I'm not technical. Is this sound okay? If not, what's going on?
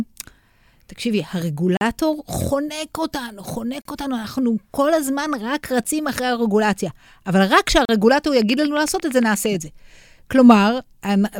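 No, there are two problems. At 1.77, 3.82, 5.84 and 7.85 seconds the speech briefly drops out into hard-edged silence, about 40 milliseconds each (the one at 5.84 is shorter, about 10). That's a gap between stream segments: the audio arrives in two-second pieces that don't quite join, so a sliver of silence fills each seam, though nothing is lost.

From 8.42 to 9.47 seconds there's a steady ticking over the speech, about ten clicks at nearly nine per second, louder than the speech itself. This is a train of clicks, likely from electrical interference or a faulty connection or power supply.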